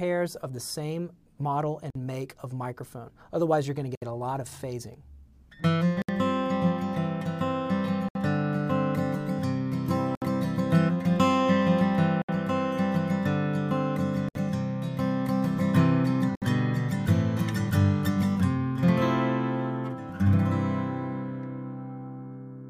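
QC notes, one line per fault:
1.90, 3.95, 6.02, 8.09, 10.15, 12.22, 14.29, 16.35 s: gap at a join of encoded pieces. Silences of about 50 ms, then 67 ms, recur at a steady 2 s spacing as separately encoded pieces are joined. The sound resumes exactly where it stopped, so nothing is lost, unlike a dropout.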